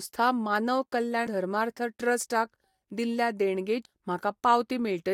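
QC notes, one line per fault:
1.26 s and 3.85 s, compressed frames skipped: the speech lurches forward at each point, losing about a tenth of a second at 1.26 s and nearer a third of a second at 3.85 s. Whole blocks of encoded audio were never played, the jump sizes suggesting several frames at the first and about twice as many at the second.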